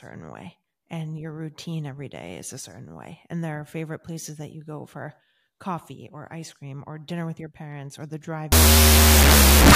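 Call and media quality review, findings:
Wrong sample width, 8.52 s to end of clip (9.75 s), right after "parents or the drive". Loud broadband noise with the speech buried underneath, running at half speed, an octave low. Fits 16-bit PCM read as unsigned 8-bit in the decode/format stage: byte pairs split, and only the high bytes carry the real signal. Unlike clipping or bit-crushing, speed and pitch shift as well.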